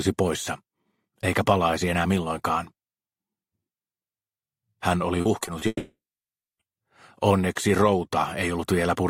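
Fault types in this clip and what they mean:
repeated packet loss (robotic sound): From about 5.21 to 5.63 s the sound turns choppy, with several short holes, the longest around 40 ms. Each is papered over by stretching the last bit of sound, so about a quarter of that stretch is filler.
long network dropout: Right after, from about 5.67 to 6.61 s, the last sound smears into a fading buzz, then about 0.65 s of silence before the audio returns with a chunk missing. The stream likely stopped arriving for almost a second.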